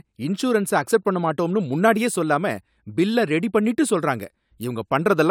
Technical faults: none

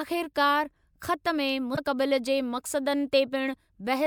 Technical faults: damaged data in a compressed stream

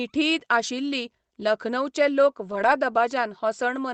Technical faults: lost packet rebuilt from error correction

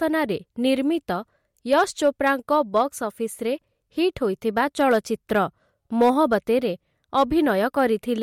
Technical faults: hard clipping

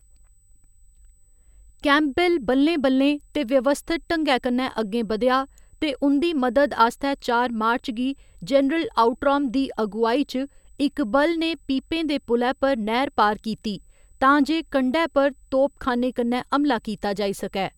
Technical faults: USB whine

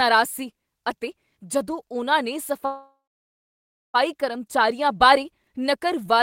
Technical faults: call audio freeze

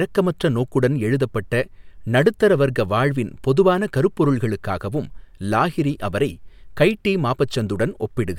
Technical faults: none

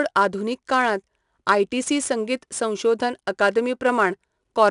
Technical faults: 4-bit ADPCM compression; bit error spike

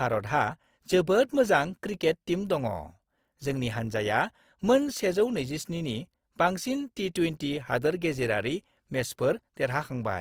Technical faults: Opus compression

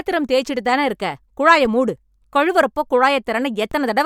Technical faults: DC step

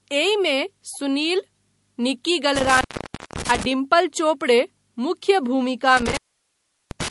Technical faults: MP3 compression; intermittent contact

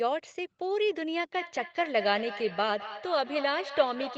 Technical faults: feedback echo between two devices

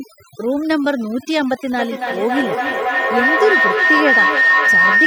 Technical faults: overdone noise removal; feedback howl

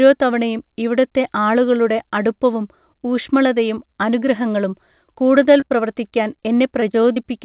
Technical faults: short concealed packet loss

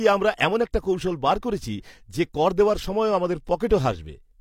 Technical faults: overlap between stream segments

